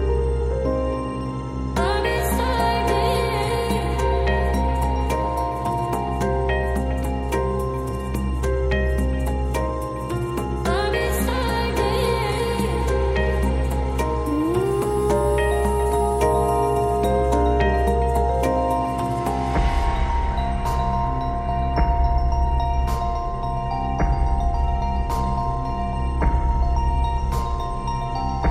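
A steady low tone sits under the sound from start to finish, fairly prominent at roughly 15 dB below the main signal. This is mains hum at 60 Hz, where a ground loop or a nearby transformer has let the power-line frequency leak into the audio path.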